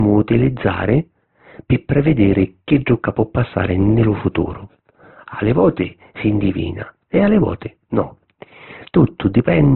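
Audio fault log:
throughout, low-bitrate audio saved at a high bitrate: the speech was likely squeezed through a very low-bitrate codec first, consistent with Opus at about 12 kbit/s, and then re-encoded as MP3 at a rate that points to around 256 kbit/s. The generous second encoding cannot rebuild what the first discarded, so the band stops dead with nothing above 4.2 kHz, leaving the speech dull and muffled, and the coarse first-pass artefacts remain.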